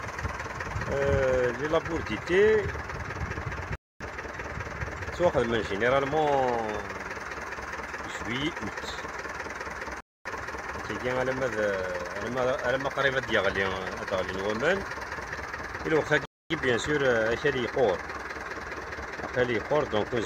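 Hard-edged quarter-second silences cut in at 3.75, 10.00 and 16.25 s, each 250 ms long: a gap between chunks, where silence separates the 6-second blocks at every join.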